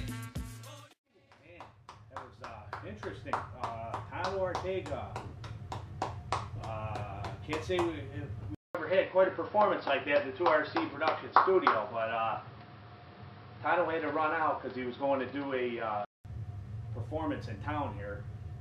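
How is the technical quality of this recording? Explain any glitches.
The recording has one clear glitch, a stretch where the sound quality drops. An input switched to a poorer device from 8.55 to 16.25 s is the likely cause. Partway through, capture appears to jump to a lesser microphone or headset path and then back. At the switch there is a gap of about 200 ms, after which nothing is heard above 5.5 kHz, so the sound turns dull and boxy. The level shifts by roughly 5 dB, and a new background noise sits about 30 dB below the signal until the original tone returns.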